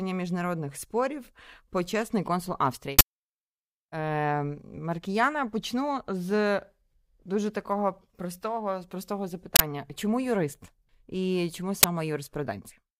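Uninitialised buffer bursts at 2.99–3.01 s, 9.56–9.60 s and 11.83 s play unwritten memory as loud digital noise, showing as dense waveform blocks and bright broadband spectrogram columns.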